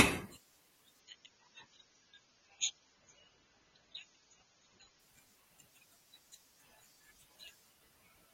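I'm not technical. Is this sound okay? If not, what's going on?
No. From 1.0 to 5.0 seconds you hear an adaptive stream at a lower bitrate. The internet connection slowed, so the player quietly switched to a smaller, cheaper version of the same speech for those four seconds. To save data, that version throws away the crisp top end, with nothing above 6.9 kHz, so the voice turns dull and watery. There's no gap or pause. The quality simply drops suddenly, then snaps back.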